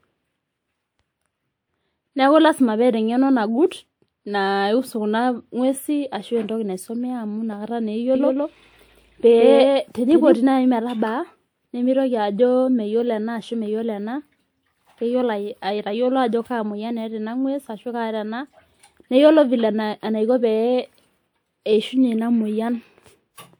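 From 8.15 to 10.37 s there's a doubled audio track: an equally loud copy trails about 150 ms behind, likely from a slower second capture or a misaligned edit.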